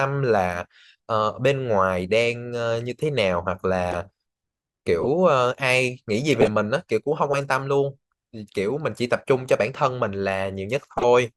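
Corrupt frames decoded in this speech clip: damaged compressed frames were played anyway, putting energy at wrong frequencies as brief chirps or noise bursts at 3.91–3.96, 5.01–5.06, 6.31–6.48 and 10.97–11.05 s, the third longest and loudest, near full scale.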